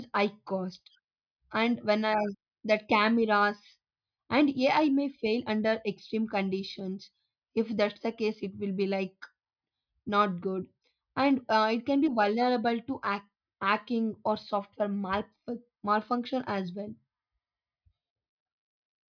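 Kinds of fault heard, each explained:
No faults turn up anywhere in this recording, so there's nothing here to list or explain.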